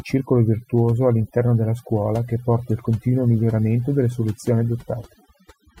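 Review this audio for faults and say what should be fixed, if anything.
Overdone noise removal runs through the whole speech clip. The noise reduction was set too hard. Bands near its noise estimate are cut deep, taking quiet speech detail with them. Pauses sink to near silence with twinkling specks. Use gentler reduction settings and check the result by ear.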